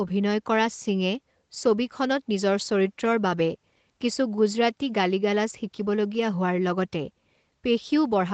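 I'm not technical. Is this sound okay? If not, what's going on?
Yes, nothing is wrong with this speech; it sounds like a normal internet call, with the bass trimmed slightly by the microphone processing and nothing above 8 kHz, which is typical of a call compressed with Opus.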